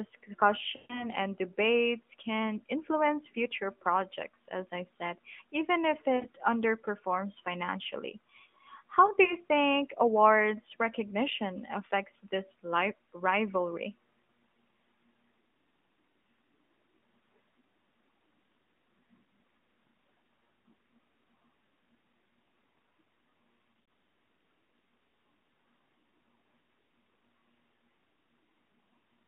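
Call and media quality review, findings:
Lost AMR speech frames, 0.76–1.08 s. Speech smears and fades out. About 140 ms concealed, which fits seven consecutive frames. Decoder repeats the last pitch and vocal tract settings with falling gain.
6.16–6.28 s. Shorter drawn-out sound, about 60 ms concealed. Same mechanism.
9.24–9.34 s. Brief dip, consistent with a single 20 ms frame.
23.72–23.88 s. Scattered warble over 160 ms, about 100 ms concealed. Longest run 40 ms.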